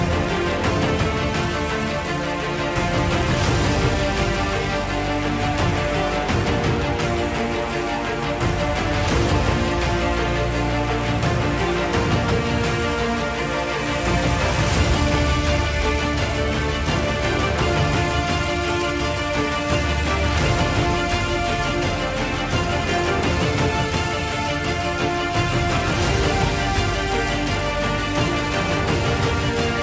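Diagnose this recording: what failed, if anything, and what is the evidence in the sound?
Nothing failed: the sound comes through the call path as expected, with nothing above 8 kHz, which fits a wideband G.722 codec.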